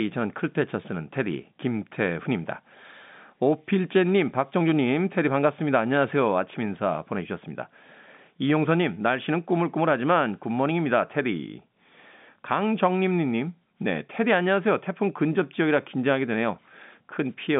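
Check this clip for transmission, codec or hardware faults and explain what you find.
Nothing faulty detected.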